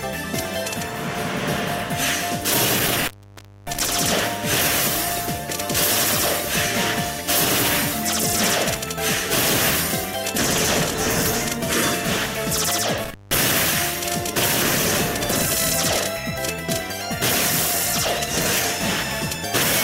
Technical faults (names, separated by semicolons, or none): intermittent contact